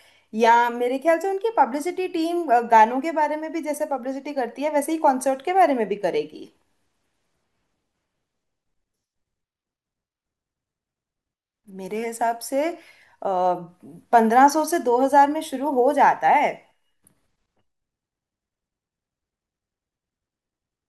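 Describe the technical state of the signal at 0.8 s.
At 0.8 s the speech signal is intact, with no dropout, clipping, glitch or other fault present at that moment.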